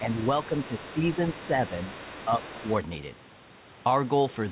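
From 0.0 to 0.1 s, speech suppressed in double talk: the echo canceller, likely confused by both sides talking, pulls the talker down by about 5 dB. From 0.11 to 1.09 s, the other side's voice leaks through: residual loudspeaker echo the canceller likely missed sits faintly underneath, about 20 dB below the speech. Within that span, from 0.48 to 0.98 s, suppression deepens to about 10 dB, likely the canceller ducking the talker along with the echo. From 1.14 to 1.77 s the talker dips again by about 5 dB, with a fainter leak, about 25 dB down, from 1.28 to 1.47 s. From 1.67 to 2.72 s the other side's voice bleeds through again at about 20 dB below, and a brief dip of about 5 dB from 2.25 to 2.43 s overlaps it. All of this sits inside a telephone-band call path with nothing above 4 kHz, which fits G.711 mu-law at 64 kbps.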